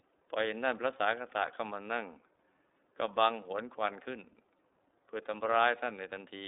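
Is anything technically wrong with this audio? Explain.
Yes. iLBC codec damage runs throughout the whole speech clip. The codec codes each frame's excitation independently, a pattern that fits 30 ms frames at roughly 13 kbps. That leaves the speech plainly rough and synthetic, confined to a 300 Hz to 3.7 kHz telephone band, with nothing above 3.8 kHz.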